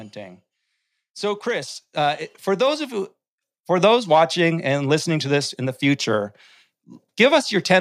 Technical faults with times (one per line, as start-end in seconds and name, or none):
1.62 microphone volume stepped up